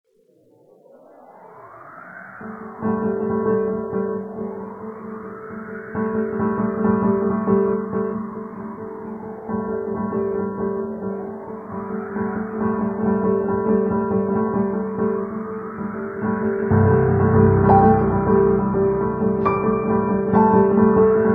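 No technical faults are audible anywhere in the recording.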